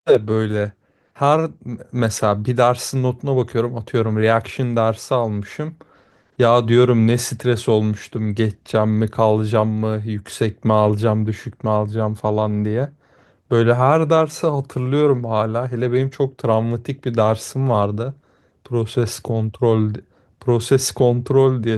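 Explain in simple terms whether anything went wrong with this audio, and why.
Nothing went wrong; no faults can be heard here.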